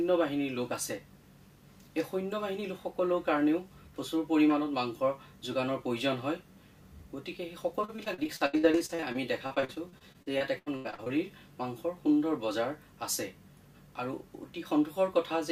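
From 7.81 s to 11.11 s the sound breaks up into repeated packet loss, giving a choppy, robotic quality. Data keeps going missing or arriving too late. Each hole is covered by stretching the last sound forward, and another hole soon follows. There are 32 such gaps, the longest 83 ms. About 29 percent of the span is patched this way. The result is stuttering, with pieces missing.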